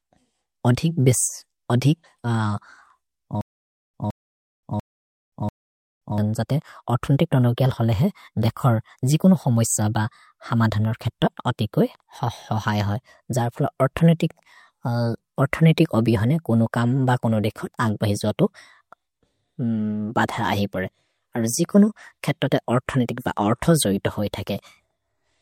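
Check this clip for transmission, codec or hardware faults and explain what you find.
One fault is audible, a stutter with silent gaps from 3.41 to 6.18 s. A 166 ms burst of speech repeats four times, each followed by about 526 ms of dead silence, a 692 ms cycle. The stream likely stalled, replaying its last fragment at each retry, and the speech from that span is lost.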